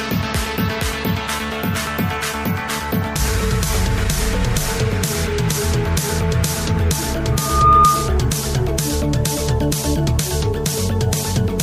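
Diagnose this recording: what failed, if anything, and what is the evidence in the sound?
Loudspeaker feedback squeal: the microphone picked up its own loudspeaker and the loop gain exceeded one, so a 1.2 kHz tone swelled within about 0.4 s to roughly 10 dB above the sound, from 7.32 to 8.26 s.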